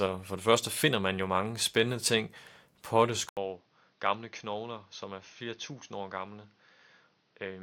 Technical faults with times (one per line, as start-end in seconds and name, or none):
3.29-7.62 input switched to a poorer device